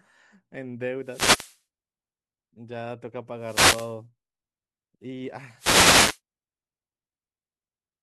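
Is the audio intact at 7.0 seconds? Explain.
Yes, the speech at 7.0 seconds is intact, with no audible fault at that moment.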